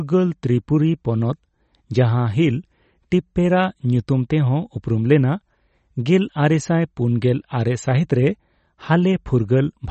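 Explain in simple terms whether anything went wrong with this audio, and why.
Yes. Across the whole speech clip there is plainly audible MP3 compression damage, likely from heavy MP3 encoding. Nothing above about 8.3 kHz remains, and s sounds have a watery, swirling quality. A simple treble cut would only sound dull, without that shifting, metallic swirl.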